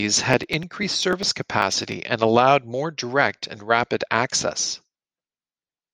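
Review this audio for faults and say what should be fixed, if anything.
From 0.14 to 1.92 s, just before "and allowed more direct", there are periodic USB or driver dropouts: ticks every 0.099 s where something stalls the bus or driver and about a millisecond of audio is skipped. To prevent them, give the interface its own USB port and raise the buffer size.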